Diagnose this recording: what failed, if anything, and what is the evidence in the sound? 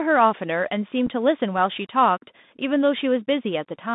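Bluetooth CVSD headset codec, at the codec stage, throughout: the spectrogram is empty outside 150 Hz to 3.7 kHz. Slope-overload distortion and granular hiss fit a 64 kbps CVSD link.

Unconcealed Bluetooth headset packet loss, on the wireless link, at 1.07 s: the waveform shows a 7.5 ms flat hole with hard edges. It is a single dropped packet that was replaced with silence or an idle pattern.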